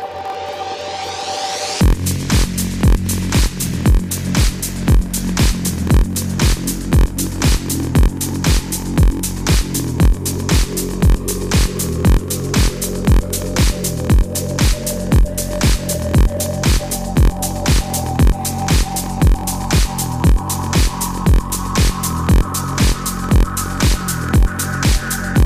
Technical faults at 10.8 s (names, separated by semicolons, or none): block size mismatch (padded)